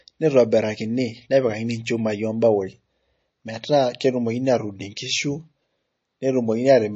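From start to finish the speech sounds dull and watery, with nothing above 7.9 kHz and a swirly, metallic sheen on the s sounds, and consonant attacks smeared rather than crisp. The likely cause is heavy MP3 compression. Starved of bits, the encoder has cut off the treble and dropped the quieter frequency lines, which then flicker in and out from frame to frame. The damage is plainly audible, consistent with a bitrate around 32 kbps.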